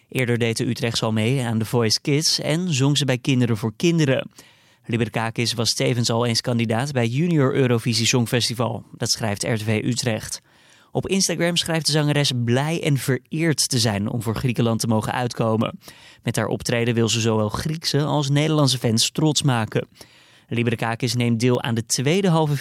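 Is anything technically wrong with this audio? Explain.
Yes. Word clock ticks run through the speech from 0.19 s to 22.15 s. There are about forty of them, roughly one every 0.7 seconds. The receiving device is reading a digital link on its own clock, not locked to the sender's. The two clocks differ by something like 40 ppm. Each time they slip past each other, a sample is dropped or repeated. That single-sample jump is heard as a sharp, regular tick.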